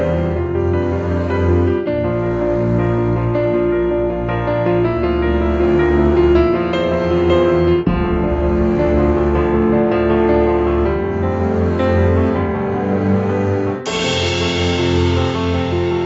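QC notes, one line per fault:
Nothing stood out on listening; the top end stops at about 8 kHz, as expected from the call's microphone processing and Opus codec.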